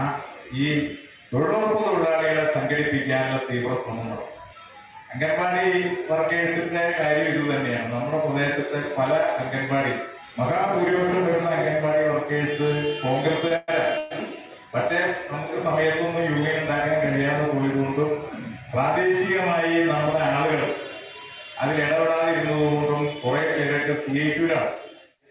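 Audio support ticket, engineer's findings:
Sound briefly held and stretched, 13.48–13.52 s, slight buzz or dip, nothing lost. Short stall from a late packet: jitter buffer ran dry and the receiver extended the last sound until the packet arrived.

Sound continues as a fading buzz or hiss, 13.56–13.70 s and again 13.98–14.13 s, with no true silence, resuming where it stopped. Call audio freeze, likely from delayed packets emptying the jitter buffer. Adds about 114 ms and 127 ms of delay.

Audio runs about 6% fast at unchanged pitch, slightly hurried, 24.08–25.22 s. Jitter buffer speed-up: receiver trimming short pitch-period slices, about 70 ms in total, to drain excess buffered delay. Band-limited below 4 kHz throughout, consistent with the G.711 A-law call path.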